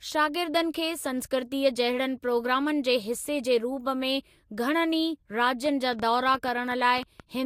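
Something in the chain, likely interference from nearby equipment or a faulty connection or power supply, began injecting short pulses at 5.66 s and kept going until 7.21 s. The result is a train of clicks laid over the speech: around ten near-identical pops at about 6.5 per second, spaced unevenly rather than in a steady tick. They peak at about 5 dB above the speech itself, so they stand out sharply and carry straight through the pauses as well.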